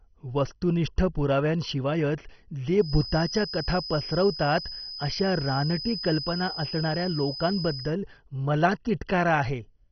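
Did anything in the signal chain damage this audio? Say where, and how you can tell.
Yes. The codec stage has left its mark across the whole speech clip: nothing survives above about 6.1 kHz, and what remains has a gurgling, granular texture, with upper bands flickering in and out. This is MP2 compression at heavy damage, likely from a rate that fits around 32 kbps. A simple low-pass filter would dull the sound just as much, but it would stay smooth. Here the sub-bands are starved of bits and coarsely quantised, which produces the bubbling grit.

A feedback whistle sits behind the speech from 2.76 s to 7.96 s, starting just after "वस्तुनिष्ठ पुराव्यांशिवायच". It is a thin, steady tone at 5 kHz, roughly 10 dB below the speech, swelling and fading slowly in level. This most likely comes from a loudspeaker-to-microphone loop on the capture side, held right at the edge of feedback. Unlike an electrical interference tone, it neither stays perfectly steady nor grows. 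It also has no mains-related harmonics, and it never runs away into a howl.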